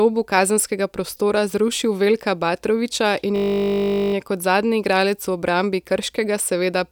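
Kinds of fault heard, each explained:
System hang loop: from 3.36 to 4.14 s the speech locks into a steady 50 Hz buzz, a single 20 ms slice repeating 39 times before speech resumes with essentially nothing missing. The system stalled while the sound hardware kept replaying its short ring buffer.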